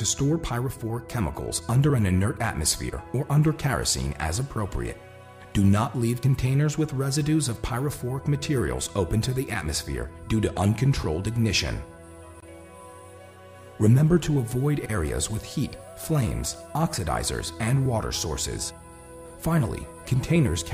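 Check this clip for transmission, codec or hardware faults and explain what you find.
No transmission, codec or hardware faults.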